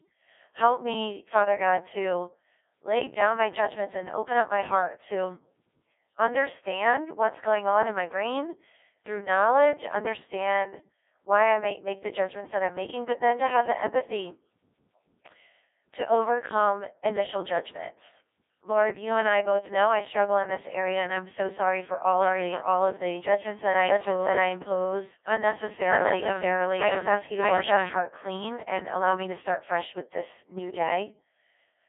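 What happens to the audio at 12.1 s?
At 12.1 s the speech is running through the Codec 2 vocoder, which holds for the whole clip. Only pitch, voicing, energy and a coarse spectral envelope survive, with the voice resynthesised from sine waves. The result is heavily robotic and buzzy, confined to roughly 300 Hz to 3.6 kHz with nothing above 3.8 kHz, consistent with a rate near 1.6 kbit/s.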